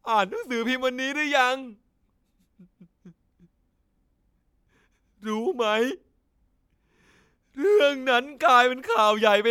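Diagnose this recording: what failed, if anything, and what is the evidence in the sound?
Nothing in this speech recording points to a failure at any stage of the chain. The sound gives no evidence of trouble anywhere from capture to playback.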